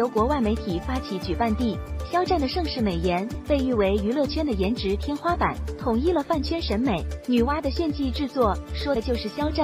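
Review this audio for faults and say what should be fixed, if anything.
At 8.95 s, compressed frames are skipped: about two 26.1 ms frames are lost, so the audio jumps ahead roughly 50 ms instead of falling silent, unlike a dropout. Prevent this by checking file integrity and retransmitting or repairing damaged frames before decoding.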